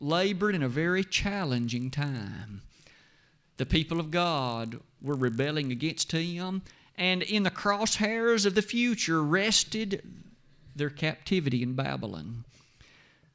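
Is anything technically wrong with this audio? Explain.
Yes. From 1.3 to 6.34 s a resampler restarted on every block converts each 20 ms block in isolation, leaving a small error at every edge. The result is a 50 Hz buzz under the speech that is present only while signal is present. A spectrogram shows thin vertical lines every 20 ms, and the waveform shows small discontinuities at each block boundary.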